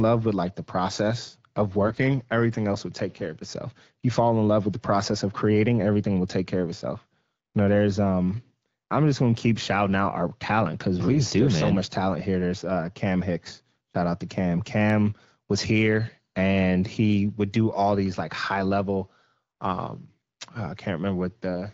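At 1.86 to 1.99 s, between "like the process of" and "everything else will take", and again at 11.12 to 11.20 s, between "out our talent because" and "do so much talent", AMR bit errors corrupt the less protected bits of several frames, heavier in the first burst than the second. Excitation pulses land in the wrong places and the pitch, gain and spectral detail drift, so the speech keeps its pitch and level but turns briefly hoarse, scratchy and gargly over the light wideband coding.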